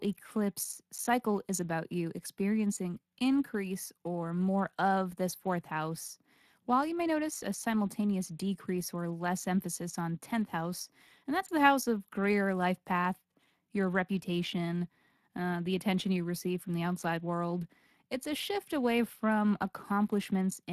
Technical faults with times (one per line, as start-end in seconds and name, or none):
0.00-20.72 Speex codec